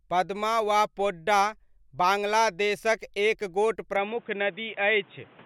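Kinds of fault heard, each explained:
Input switched to a poorer device: From 3.96 s to the end, the speech abruptly loses everything above 3.8 kHz and turns dull and boxy, with no gap at the transition and little change in loudness. A new, fairly low background noise floor, around 30 dB under the speech, comes in with it. The likely cause is the recording input changing mid-take to a lower-bandwidth microphone or a headset's call profile, which carries its own tone and noise.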